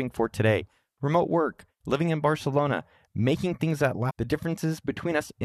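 Part of the compressed stream carrying this speech clip is damaged between 4.09 and 4.11 s, where lost, zeroed or foreign bytes sit in place of valid frame data. The decoder misreads that stretch, loses its alignment with the frame structure and must hunt for the next intact header before normal decoding resumes. The result is a brief chirp or blip of about 23 ms cutting across the speech.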